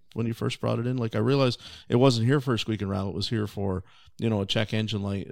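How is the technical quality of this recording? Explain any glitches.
The technical quality of this recording is sound, with no glitches to explain.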